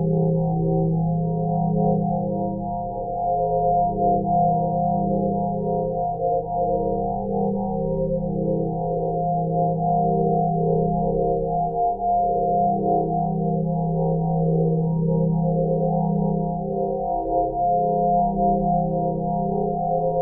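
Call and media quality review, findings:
No faults found in this audio.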